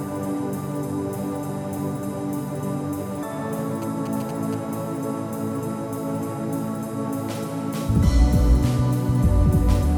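GSM signalling bursts interrupt the audio from 3.82 to 4.55 s as a galloping dit-dit-dit of short buzzes repeating at about 217 Hz, roughly 15 dB below the signal. A nearby 2G phone exchanging brief radio bursts is being rectified by the audio circuitry.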